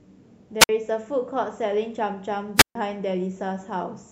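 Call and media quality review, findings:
Wireless microphone squelch dropout at 0.60–0.69 s (about 55 ms mute) and 2.56–2.75 s (about 139 ms mute). Analogue FM link fading until the receiver squelch gates the output. Hiss swell before each hole separates it from a clean network packet gap.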